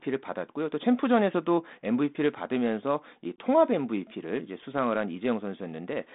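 At 3.36 to 3.39 s the speech shows packet loss on an ADPCM call. A single 20 ms packet went missing and was filled with silence, leaving a hard-edged hole in the sound. The receiving decoder's adaptive predictor and step size then no longer matched the sender's, so when the speech resumes it comes back slightly distorted, before settling within some tens of milliseconds on the light-sounding 32 kbit/s G.726 line.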